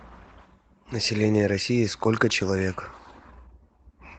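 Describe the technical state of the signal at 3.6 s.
At 3.6 s the speech signal is intact, carried by its Opus voice coding with no fault present at that moment.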